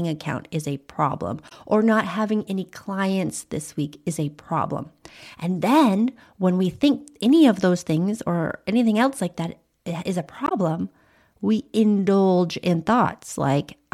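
Damaged data in a compressed stream hits this speech clip twice, at 1.45 to 1.52 s, after "account is a problem", and 10.44 to 10.52 s, after "that eh is a". Corrupted frames make the decoder lose sync and hunt for the next header, leaving a chirp, squawk, click or short hole.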